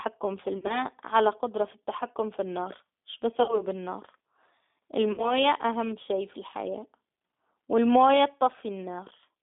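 From start to finish the speech passes through a G.729 codec, heard as a narrow telephone band from about 200 Hz up to 3.6 kHz, with a plainly rough, slightly synthetic edge. That edge fits an 8 kbit/s coder that rebuilds each short frame from a vocal tract filter, a pitch predictor and a few pulses. Simple band-limiting would only sound muffled, but here the model rebuild adds a rough, synthetic quality.

VoIP packet loss concealed by the speech codec breaks in three times. From 0.58 to 0.85 s, the gaps are scattered rather than continuous, with the longest run lasting about 40 ms. From 3.43 to 3.63 s, and again from 5.12 to 5.44 s, the decoder stretches the last pitch and filter into a fading buzzy tone or coloured noise. The speech then stays weak for a moment after packets return. Plain dropouts would instead leave silence or hard clicks.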